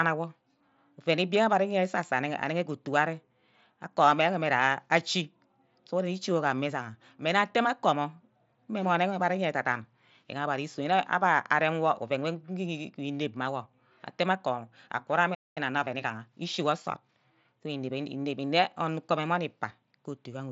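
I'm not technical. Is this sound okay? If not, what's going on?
No. At 15.34 s the speech cuts out for about 0.22 s, then resumes. This is a playback stall: the player briefly had nothing to play, most likely because incoming data ran short or its processing was held up.

Right after, from 15.58 s to 17.72 s, the speech runs about 1.1 times faster at its normal pitch. This is time-compressed catch-up: the player trims and blends tiny pieces of audio to recover the time lost in the gap.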